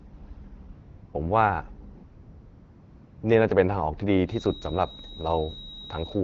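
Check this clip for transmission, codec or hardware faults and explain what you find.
Two kinds of fault are present: AMR comfort noise in two gaps and a feedback whistle in the closing stretch. The AMR-WB wideband coding itself shows only light damage.

AMR comfort noise replaces the real background from 0.71 to 1.13 s (about 420 ms) and from 1.93 to 3.23 s (1.3 s). With speech frames halted, the receiver synthesises smooth, steady noise from a rough level and spectrum description. A spectrogram shows flat, featureless blocks with abrupt edges.

A feedback whistle runs from 4.24 s to the end: a thin, steady tone at 3.8 kHz, roughly 20 dB below the speech, swelling and fading slowly in level. It likely comes from a loudspeaker-to-microphone loop sitting just at the edge of feedback. On a spectrogram it appears as one unbroken horizontal line.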